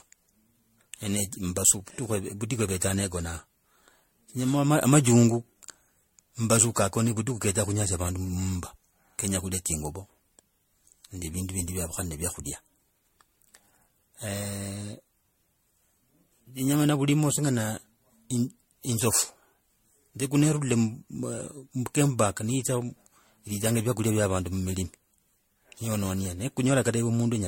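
Throughout the speech, the sound is swirly, hollow and smeared, with blurred consonant attacks and nothing above 16.5 kHz, likely generation loss from repeated MP3 re-encoding near 64 kbit/s, perhaps about seven passes. A single encode at that bitrate wouldn't sound this degraded.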